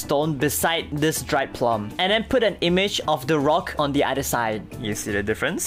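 No technical faults are audible.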